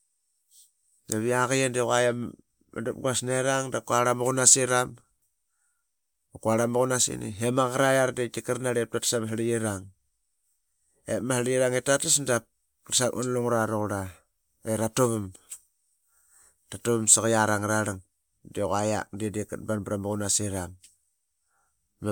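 Nothing stood out as a technical problem on listening to this speech recording.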